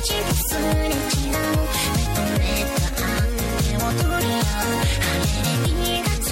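From start to finish the sound carries plainly audible MP3 compression damage, likely from an encode starved of bits, which fits a rate around 64 kbps. Faint detail flickers in and out between frames, giving a watery, swirling texture with metallic chirps on sharp sibilant or cymbal-like content and softened attacks. A simple low-pass filter would dull the top without that frame-to-frame shimmer.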